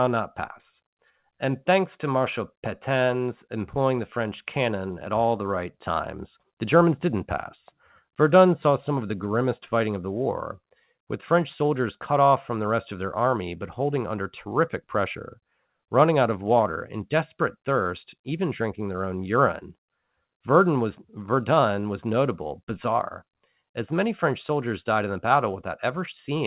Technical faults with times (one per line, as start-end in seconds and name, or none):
none